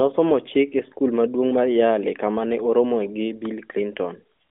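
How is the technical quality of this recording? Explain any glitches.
No glitches or faults detected.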